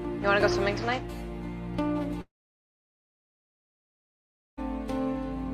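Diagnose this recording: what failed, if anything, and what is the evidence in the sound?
A long network dropout runs from 2.21 s to 4.59 s. The sound trails off into a brief fading buzz, then about 2.3 s of silence, and resumes with roughly 2.36 s missing. This is likely packet loss that the receiver's concealment masked only briefly.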